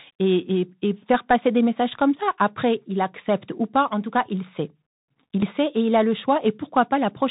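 Speech recorded through a Bluetooth headset link carrying the CVSD headset codec, with plainly audible codec damage throughout. The band stops at about 4 kHz, so the audio sounds narrow and telephone-like. The sound fits a 64 kbps stream in which each sample is coded as a single up-or-down bit with an adapting step size. A granular hiss sits under the speech, sibilants come out scratchy, and loud high-frequency energy outruns the step size and distorts. At 5.42 s, just before "sait et il a", there is a short tick lasting a few milliseconds. This is a Bluetooth headset packet repeated. The link dropped what sounds like one voice packet of about 3.8 ms, and the decoder played the previous packet's data again in its place. Because only a single packet was replaced, the result is a brief click rather than the sustained buzz a longer run of repeats would produce.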